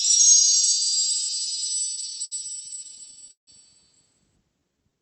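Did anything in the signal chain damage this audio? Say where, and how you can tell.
Yes, and it's at the network and jitter-buffer stage. From 1.95 to 3.49 s there's a run of repeated stalls (stutter): two dozen short holds, the longest 160 ms, where the receiver stretches the last sound while it waits for late packets. Nothing's lost, but the sound drags.

Then a jitter buffer slow-down at 4.60 to 4.95 s. The receiver rebuilt its reserve by repeating tiny periods, adding about 77 ms, so that stretch plays at roughly 81% speed with the pitch unchanged and a slightly smeared, drawn-out feel.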